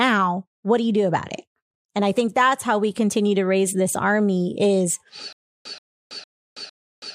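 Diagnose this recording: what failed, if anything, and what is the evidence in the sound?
Stutter with silent gaps from 5.33 s to the end, right after "raise this army is": a 129 ms burst repeats four times, with about 327 ms of dead silence between, every 456 ms. Likely a stalled playback buffer replaying its last fragment on each retry, so the real audio is lost.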